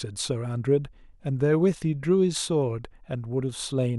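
No technical faults are audible anywhere in this recording.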